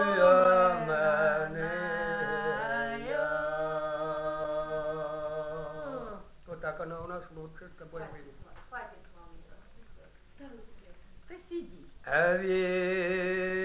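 No technical faults can be heard; the audio has come through a call path whose band stops at 4 kHz with nothing above it, a narrowband ceiling that points to a G.711 mu-law codec running at 64 kbps.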